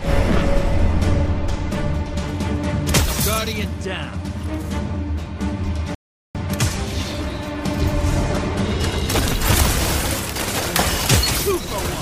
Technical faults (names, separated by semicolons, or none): rebuffering stall